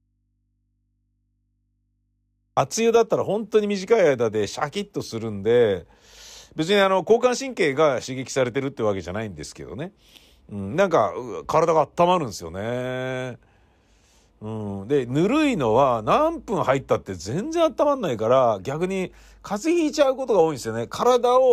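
Audio dropout to a faint residue from the start to 2.57 s in this speech recording: the wanted signal is already missing, leaving only mains hum around 50 dB below normal level, likely from an interrupted input whose still-live path kept amplifying an open connection, before the speech returns abruptly.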